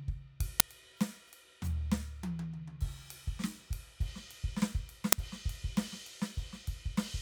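At 0.60 s and again at 5.12 s the music is hit by an uninitialised buffer: a block of about 5 ms was played before audio was written into it, so leftover memory came out as samples, heard as a brief, loud crack.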